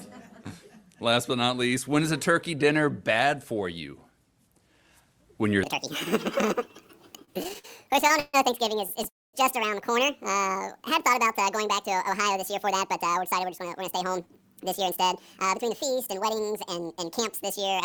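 From 5.63 s to the end, a section at the wrong speed plays 1.8 times too fast, likely because the audio was fitted to the wrong clock. Pitch rises about ten semitones along with tempo, so the spectrogram's harmonics jump upward and spread apart while waveform events crowd together.

Between 7.19 s and 8.35 s, repeated stalls (stutter) appear as twelve short holds where the jitter buffer ran dry and the last sound was stretched to cover the wait. This filler makes up 321 ms, with the longest hold 141 ms. Each shows as a smeared, frozen band on the spectrogram.

At 9.08 s to 9.35 s, a call audio freeze sustains the last sound, likely because packets were held up in transit. The sound then decays so that about 230 ms is silent before it resumes. The waveform shows a fading tail, then a flat gap.

From 11.96 s to 15.71 s, jitter buffer speed-up runs the audio at about 106 percent by cutting many tiny pitch-period slices, roughly a fifth of a second in total. 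Pitch stays put but pacing hurries.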